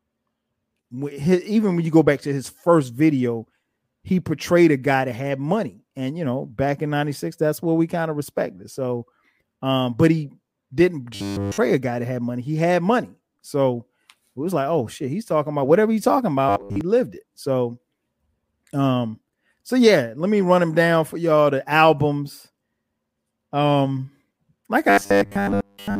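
In this speech clip, audio likely arrived too seldom, so roughly 10 ms buffers were replayed in place of skipped audio. This produces robotic sound from repeated short buffers: a rigid 100 Hz metallic buzz at 11.15–11.59 s (wholly replaced), and at 16.49–16.81 s and 24.90–26.00 s (mostly replaced).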